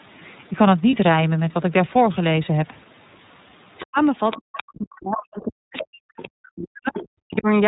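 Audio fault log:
throughout: iLBC codec. The audio is cut off at 4 kHz and carries a slightly rough, synthetic edge. Each 30 ms frame's excitation is coded on its own, and the plainly audible coding damage fits iLBC's 13.33 kbps mode.
0.90–0.93 s: lost iLBC frames. For about 30 ms the sound turns into a held, faintly buzzy vowel. The decoder repeats the last pitch cycle mixed with noise, which fits one lost frame. Clean audio returns at once because the next frame decodes independently.
3.79–3.86 s, 4.31–4.63 s, 5.75–5.85 s, 6.22–6.28 s, 6.90–7.07 s: other side's voice leaking through. Faint scraps of a second voice sit roughly 15 to 20 dB below the main speech. The likely cause is far-end loudspeaker sound reaching the microphone that the echo canceller did not fully remove.
3.85–3.99 s, 4.36–7.47 s: speech suppressed in double talk. The main voice dips, at its deepest around 40 dB down. 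The short first dip lasts about 150 ms, and the second spans roughly three seconds. This likely happened because the echo canceller, faced with both sides at once, turned down the near talker along with the echo.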